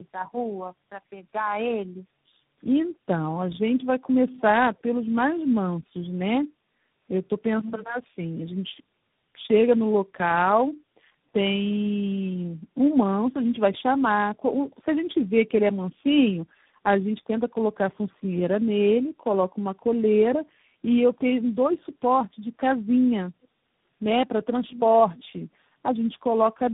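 From the start to the end, the speech carries tandem speech coding. Nothing reaches above 3.8 kHz, and the sound is rough, muffled and warbly beyond what a single narrowband codec produces. That fits a chain of four low-rate speech codecs in sequence, with G.726 as the last, where each decode-and-recode stage compounds the quantisation damage left by the previous one. The artefacts therefore stack rather than average out.

From 12.54 to 12.74 s, the room sound is gated by the echo canceller. For about a fifth of a second the background sinks by about 8 dB and then recovers. The canceller judged far-end audio to be playing through the loudspeaker and pulled the microphone path down hard to suppress echo, releasing it once that judgement lapsed. The result is a brief audible hole in the ambience.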